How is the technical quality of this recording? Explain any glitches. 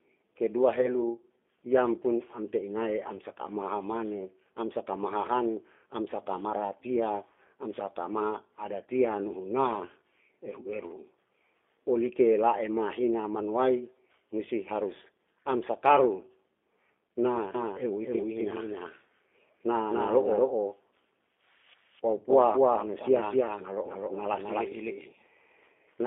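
The recording has three audible technical problems: narrowband coded speech throughout, one brief dropout early on, and a delayed duplicate over the last stretch.

From start to finish the speech sounds thin, boxy and slightly rough, with a synthetic, buzzy edge. Nothing below about 250 Hz or above 3.5 kHz comes through. That is the G.729 codec at work, which fits an 8 kbit/s telephone-style link. Rather than storing the waveform, it rebuilds each short frame from a vocal-tract filter, a pitch predictor and a few pulses, so the fine texture is plainly lost.

From 0.81 to 0.88 s the sound briefly smears into a buzzy tone or coloured noise that fades, then recovers. This is VoIP packet loss concealed by the speech codec, fitting a single lost 20 ms packet. The decoder filled the gap by repeating its last pitch and filter settings at falling gain. Because each frame builds on the previous one, the distortion lingers for a few tens of milliseconds after the real data returns.

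From 17.55 s to the end, every sound is followed by a second, equally loud copy about a third of a second later. The copy is full-band and dry, with no decay or room colour, and it starts abruptly. This is a doubled audio track, most likely the same signal captured a second time through a slower path and mixed back in with the original.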